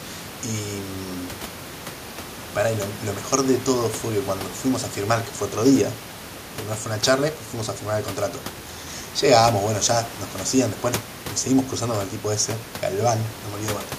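No technical faults occur at any point in this speech clip; the room noise sitting about 17 dB below the speech belongs to the recording space itself.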